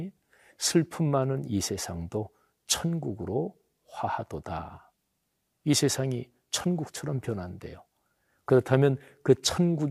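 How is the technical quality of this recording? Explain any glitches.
No technical glitches can be heard anywhere in this speech recording. There is nothing in it that needs explaining.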